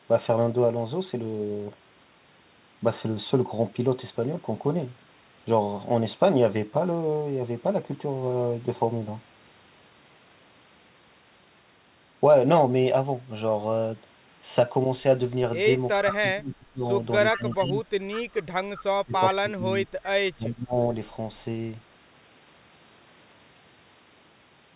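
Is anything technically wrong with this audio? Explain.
Yes. Between about 16 and 21 seconds in this speech clip, two linked call faults occur: echo leak and speech suppressed in double talk.

Echo leak appears at 16.00 s (a brief scrap), from 17.34 to 17.73 s, and at 18.75 s. A copy of the speech returns about 379 ms late, roughly 15 to 20 dB below the direct voice. The likely cause is a far-end loudspeaker whose echo canceller failed to subtract everything its microphone caught. On a spectrogram it shows as faint harmonic traces repeating earlier speech, offset in time. In the waveform it appears as low-level energy filling gaps.

Speech suppressed in double talk affects 16.03 to 16.84 s, 17.32 to 17.87 s, and 18.96 to 20.77 s. The voice dips by up to about 20 dB in the first and last stretches and about 15 dB in the second, in choppy patches. The likely cause is an echo canceller that could not separate the talker from the returning echo and attenuated both. 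On a waveform these are notched, pumping envelope drops, and on a spectrogram they are vertical bands of thinned energy. The call path's G.711 coding leaves nothing above 4 kHz throughout.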